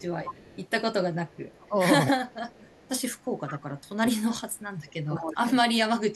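Echo leak runs through this speech clip at 0.0–0.6 s, 1.29–1.68 s, 2.25–2.89 s and 3.22–3.88 s: a copy of the talking trails about 195 ms behind, loudest at the first and last spans, roughly 15 dB down, and much fainter in between. Likely cause: a far-end loudspeaker whose echo canceller let some of its microphone pickup back into the call. Speech suppressed in double talk follows at 1.68–1.75 s and 2.06–2.16 s, with brief dips of about 15 dB, then from 3.66 s to the end the level sinks by as much as about 30 dB, because the canceller likely mistook simultaneous talking for echo and attenuated both.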